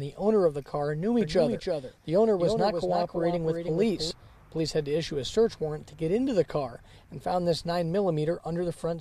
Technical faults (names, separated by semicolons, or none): doubled audio track